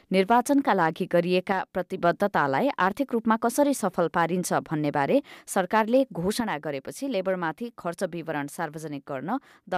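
At 1.52 s the level drops abruptly by about 6 dB and stays down until 1.98 s, then snaps back. The same drop returns at 6.40 s and holds to the end of the clip. Nothing else about the sound changes, just the level. That pattern is likely one channel dropping out: with identical content on both sides, losing one halves the mono sum, which is exactly that 6 dB step.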